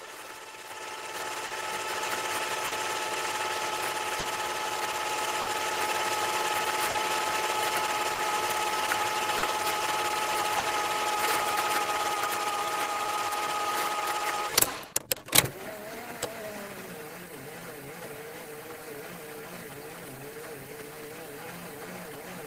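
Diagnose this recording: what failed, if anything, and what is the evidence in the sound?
Clock drift between sender and receiver runs through the whole recording. The sender's clock seems to run roughly 3 percent slow, so the receiver's jitter buffer keeps draining. You hear small timing hiccups recurring at uneven intervals. The fault sits in the network and buffer stage.

Scattered short gaps show up from 1.47 to 10.66 s: about seven small holes, the longest around 50 ms. Packets were lost or arrived late, and the receiver patched each one by carrying the last sound forward. That leaves brief ticks or smears, with roughly 4 percent of that stretch concealed.

Repeated timing corrections take over from 11.54 to 22.44 s. The receiver keeps stretching by repeating short pieces to keep pace with the slow sender, so that stretch plays at 97 percent speed and picks up about 400 ms overall. 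The edits all go one way but are unevenly spaced.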